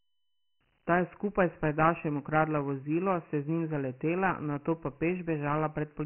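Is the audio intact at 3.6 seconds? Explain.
No. At 3.6 seconds the speech has been through Dialogic VOX ADPCM, which stores each sample as a coarse 4-bit step at about 24 kbps, fitting a 6,000-samples-a-second rate. Nothing survives above 3.1 kHz, and heavy quantisation leaves a gritty hiss trailing the speech.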